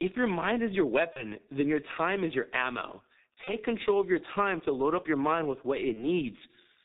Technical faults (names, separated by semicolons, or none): G.723.1 codec; VoIP packet loss concealed by the speech codec